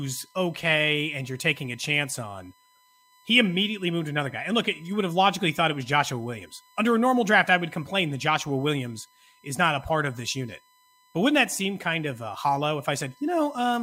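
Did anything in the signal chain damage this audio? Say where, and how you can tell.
Yes. USB whine sits under the speech throughout, a steady 1 kHz tone roughly 35 dB down. The USB bus's 1 ms frame current is leaking into the analogue power or ground wiring.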